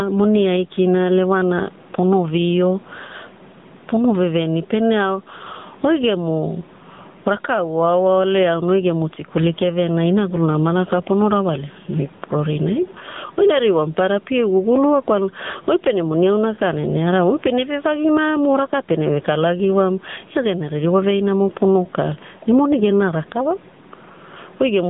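Gain pumping throughout this speech recording: the level swings by roughly 15 dB, with faint room noise about 38 dB below the voice, likely from gain set far too high feeding a fast limiter. AMR narrowband mobile codec damage is also present throughout: the band runs only from 150 Hz to 3.7 kHz with nothing above 3.8 kHz, and the plainly buzzy, synthetic texture fits a low rate near 8 kbps.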